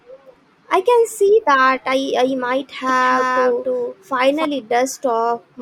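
A doubled audio track runs from 2.89 to 4.45 s, right after "that I I might": the speech gains a second full-band copy roughly 300 ms behind and about 5 dB quieter, likely from an edit holding two misaligned copies. It starts and stops abruptly, with no room decay.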